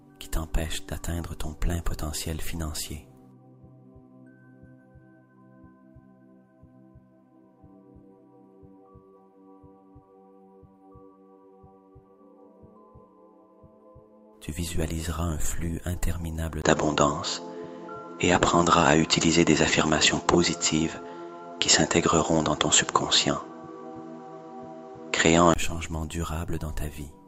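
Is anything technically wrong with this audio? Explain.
Yes. From 16.62 to 25.56 s, the sound turns dull above 7.6 kHz after a 20 ms gap. The input likely switched to a poorer device, with new faint noise and a level shift of roughly 5 dB.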